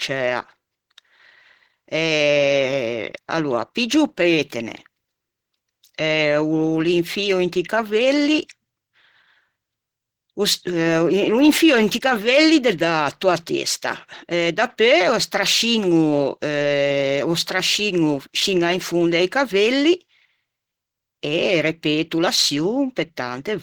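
Opus compression runs through the whole clip, from start to end. The speech is plainly damaged: it sounds muffled and hoarse, with a rough, grainy texture where clean detail should be. The likely cause is an Opus encoder starved of bits, a sound that fits a rate near 16 kbps and its hybrid speech mode. Instead of leaving gaps, the codec patches thin bands with noise or folded copies of lower ones. Content still extends to about 20.3 kHz.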